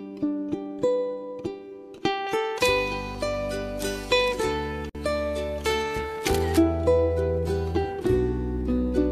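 From 2.27 s to 6.28 s the audio has pre-emphasis left on. The treble was lifted before recording or transmission, following what sounds like a J.17-type curve, and the complementary de-emphasis was never applied on playback. The top end stands roughly 11 dB higher at 10 kHz than at 1 kHz, so this section sounds thin, hard and overly bright, with sibilant energy pushed forward and little body underneath.

Inside that bright section, at 4.89 s, there is a gap at a join of encoded pieces. Two separately encoded segments were butted together without removing the encoder's start-up delay and final-frame padding, leaving a silence of about 53 ms. The sound drops out, with edges softened by the codec, then resumes from the point where it stopped, so nothing is lost but continuity breaks audibly.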